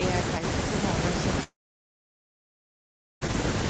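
Mains hum at 50 Hz runs through the whole clip: a steady low tone, roughly 15 dB below the speech, with some low harmonics, which points to a ground loop or nearby transformer leaking the power line into the signal path.

A long network dropout from 1.43 s to 3.23 s, likely caused by packets failing to arrive, cuts out about 1.8 s of speech. The receiver briefly extends the last sound as a fading buzz or hiss, then near-silence holds until the audio resumes with that stretch missing.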